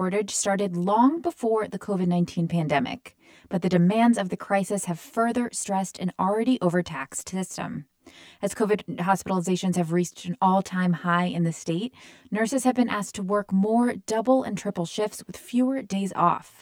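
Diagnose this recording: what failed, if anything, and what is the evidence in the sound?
Channel delay (comb filtering) runs through the whole recording. The speech sounds hollow and phasey throughout, with a fixed coloration that never moves. This points to the driver or buffer stage: one channel arrives roughly 10 ms behind the other, and the two are summed to mono. Content common to both channels cancels at evenly spaced frequencies, starting near 40 Hz, so a comb of fixed notches runs up the spectrum.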